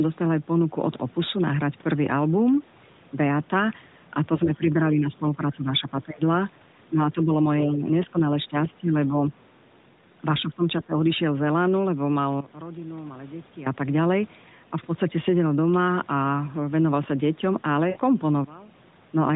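Speech suppressed in double talk, likely from an echo canceller that turned both sides down while they overlapped, hits at 4.45–6.23, 6.93–7.30, 7.62–7.87, 8.07–8.15, 8.48–8.55, 8.75–8.94 and 10.42–10.97 s. The voice dips by about 5 to 15 dB or cuts out in pieces. The waveform shows notched, choppy envelopes, and the spectrogram shows faded bands with thinned high harmonics.

A sudden gain jump at 12.41 s drops the voice and background together by about 16 dB until 13.66 s. The level changes from one sample to the next with no ramp, so the waveform steps down abruptly and the spectrogram darkens uniformly across all frequencies. The cause is likely an unramped digital gain change.

Lost AMR speech frames at 17.90–17.98 s leave a 60 ms gap, which fits three missing 20 ms frames. The decoder stretches the last sound into a brief warble that fades, then the voice returns slightly rough. On the spectrogram, the harmonics are smeared and flat, then fade. 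Everything stays below 4 kHz, set by the AMR narrowband codec.

A second sudden gain jump at 18.44 s cuts the whole signal by about 23 dB until 19.07 s. It shows as a sharp rectangular drop in waveform height and a uniformly dimmer spectrogram, with level returning just as abruptly.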